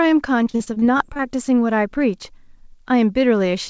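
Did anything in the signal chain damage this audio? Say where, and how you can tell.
Yes, at the network stage: repeated packet loss (robotic sound) from 0.44 to 1.21 s. Gaps up to 42 ms are filled by extending the previous sound, leaving choppy, robotic speech.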